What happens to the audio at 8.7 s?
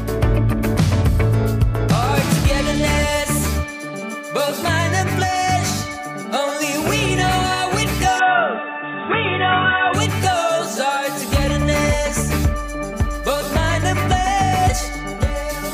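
At 8.7 s you're in the middle of what sounds like an input switched to a poorer device, running from about 8.19 s to 9.94 s. The top end suddenly disappears, with nothing above 3.8 kHz, so the sound goes dull and boxy, and a faint new noise floor shows up, roughly 35 dB under the signal. There's no gap at the switch and the level barely moves. The likely cause is the system hopping to a narrower-band mic or headset profile, then back.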